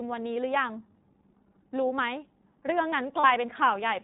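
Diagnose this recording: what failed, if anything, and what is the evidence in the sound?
Codec stage: the iLBC codec caps the whole speech clip below 4 kHz and adds a rough, synthetic edge. Simple band-limiting would not add that roughness.

Network stage: lost iLBC frames at 3.20 to 3.26 s become a brief buzzy held vowel, about 40 ms concealed. Unlike a silent dropout, it fills the gap, and speech recovers immediately.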